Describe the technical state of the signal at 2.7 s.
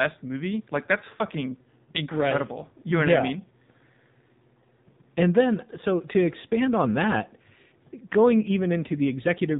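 At 2.7 s the speech carries AMR narrowband mobile codec damage, present across the whole clip. Nothing above 4 kHz survives. A pulse-driven vocal-tract model rebuilds each 20 ms frame, giving a plainly buzzy, synthetic tone that points to a low mode near 7.4 kbps.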